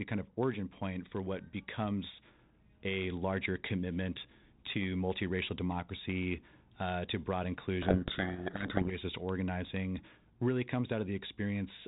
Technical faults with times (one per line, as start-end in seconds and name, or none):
7.82-8.95 codec payload misread